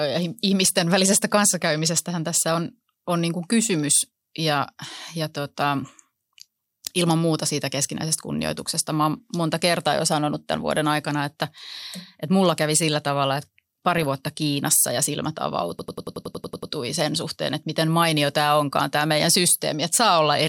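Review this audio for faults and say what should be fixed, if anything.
DAB burbling: at 13.98–14.09 s, just after "kävi sillä tavalla että", and again at 18.23–18.33 s, between "sen suhteen että miten" and "tämä onkaan tämä meidän", the speech is hit by brief noise blips lasting about a tenth of a second. Weak digital radio reception let a small fraction of a percent of bit errors slip past error correction, so a few MP2 frames decoded with corrupted sub-band data. Fix this with a better antenna or position, or a stronger multiplex.

System hang loop: from 15.79 to 16.72 s, after "ja silmät", one 92.9 ms fragment repeats ten times as a rapid machine-gun stutter at 10.8 Hz. The speech then resumes at "sen suhteen että miten" with little or nothing missing. The computer or audio driver stalled while the sound hardware kept replaying its ring buffer, and the loop length fits a 4096-sample buffer. 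Address the driver or system stall, using updated drivers and lower CPU load during capture.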